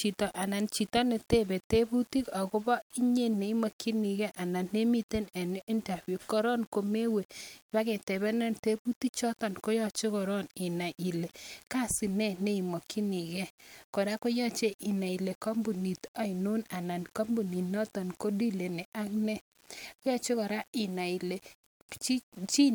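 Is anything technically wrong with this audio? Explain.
Yes. Throughout the speech there is grainy distortion that tracks the signal. This is likely low bit depth without dither: the waveform was rounded to very few levels, which fits about 8 bits. The error sits roughly 30 dB below the speech, so quiet passages turn gritty and fade into sputtering.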